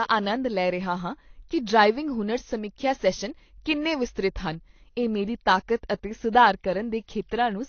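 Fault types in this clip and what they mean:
AAC compression: the speech sounds dull and smeared, with nothing above 6.5 kHz and a fizzy warble on sibilants, likely from low-bitrate AAC-LC coding around 32 kbps.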